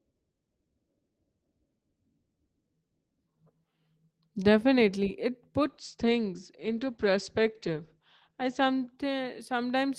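At 5.62 s there's a call bitrate drop. The bandwidth estimate fell, so the encoder got starved and the speech goes rough and muffled, with the top end cut from 20 kHz to 8 kHz. It sits at its worst for about 2.8 s, which fits roughly 12 kbps, down from 32, and recovers by 9.49 s.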